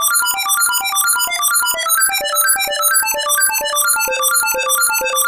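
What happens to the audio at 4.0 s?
Nothing goes wrong at 4.0 s; the sound continues intact through that moment with no dropout, click or other fault.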